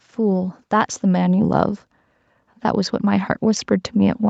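From 0.05 to 1.61 s, and again from 2.49 s to the end, automatic gain rising kicks in: the gain control decides the input's too quiet and eases it up, about 5 dB the first time, so speech and background swell together, with everything topping out around 8 kHz.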